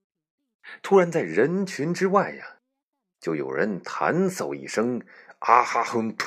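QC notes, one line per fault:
Nothing to flag here, the speech comes through without any technical problems worth a note.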